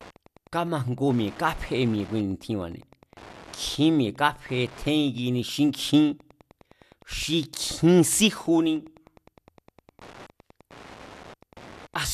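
From start to finish there's Wi-Fi interference riding under the speech: a steady ticking about ten times a second, sitting roughly 25 dB below the voice. The ticks come every 102.4 ms, which is the beacon interval of a nearby Wi-Fi radio. The circuit is picking up those beacon transmissions and rectifying them, turning each radio pulse into an audible click that keeps marching along whether anyone's talking or not.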